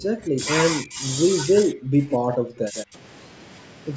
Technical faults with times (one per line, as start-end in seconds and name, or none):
0.00-0.42 speech suppressed in double talk
0.80-1.04 speech suppressed in double talk
1.44-2.96 speech suppressed in double talk
2.33-2.38 echo leak
2.75-2.85 echo leak